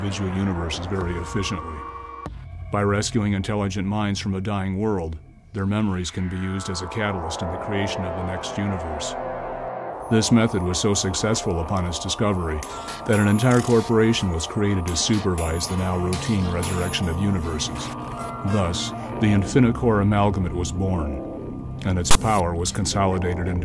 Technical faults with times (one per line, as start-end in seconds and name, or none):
22.11-22.15 file tags played as audio